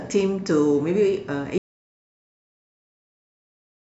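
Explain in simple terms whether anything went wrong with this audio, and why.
At 1.58 s the speech cuts out, and pure silence runs to the end. This is an audio dropout to silence, likely from a lost input.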